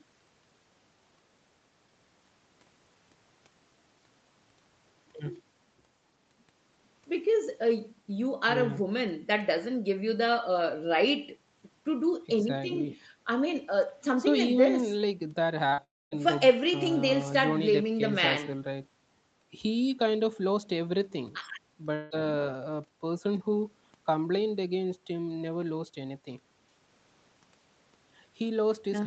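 Speech, carried over a call path whose top end stops at about 8 kHz, with three faults clustered around 15.7 s and one more near 22 s. Short concealed packet loss occurs at 15.69 to 15.74 s and again at 15.74 to 15.80 s, two back-to-back gaps of about 20 ms and 40 ms. The decoder covered each hole by extending the preceding sound, so the result is a brief smear or wobble rather than a clean break, and any short consonant falling inside may be lost. Immediately after, from 15.84 to 16.13 s, about 280 ms of audio is missing. The concealment tail fades quickly, leaving roughly 250 ms of silence before the speech resumes further along. At 21.95 to 22.12 s, about 160 ms is missing but fully bridged by synthetic continuation with no silent stretch, heard as a buzz or hiss that fades. Both of these longer gaps are likely a long network dropout, and the audio returns without the lost portion.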